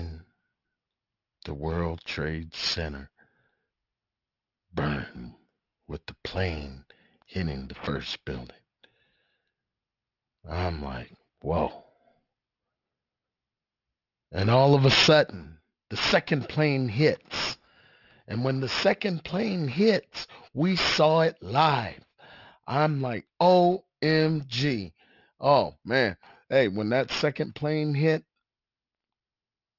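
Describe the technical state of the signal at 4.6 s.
At 4.6 s the speech carries aliasing, which runs through the whole clip rather than appearing as a local event. The sound points to a drop to a 12 kHz rate with no anti-alias filter, so content above the 6 kHz fold point mirrors back below it as false, unrelated frequencies. The folded energy sits roughly 10 dB below the wanted signal, enough to make sibilants gritty and metallic, with the spectrum pressed hard against the band edge.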